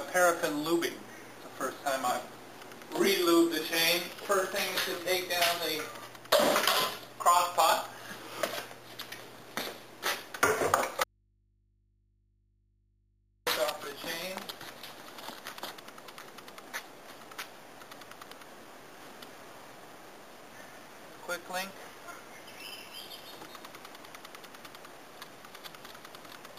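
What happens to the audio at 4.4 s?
Nothing goes wrong at 4.4 s; the audio plays through that moment intact, with no dropout, glitch or other fault.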